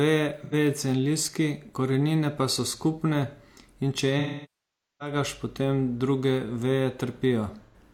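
AAC frame loss with concealment hits the speech three times: brief smeared, phasey patches at 0.41 s and 7.65 s, and an 0.81-second dropout from 4.19 s that decays to a very faint noise floor before fading back in.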